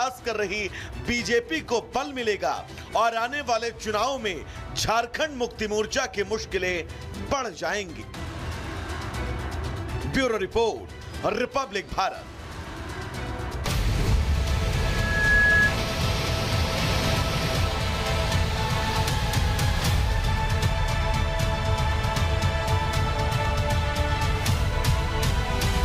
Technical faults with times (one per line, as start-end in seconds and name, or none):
14.74-15.77 loudspeaker feedback squeal